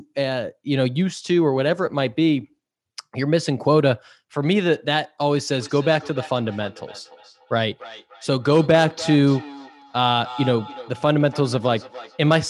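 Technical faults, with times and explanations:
5.6 to 12.36 s, feedback echo between two devices: a second device in the room is replaying this mic's audio, which gets picked up again, so everything returns roughly every 300 ms, thinner and more ringing each pass, peaking about 16 dB below the speech.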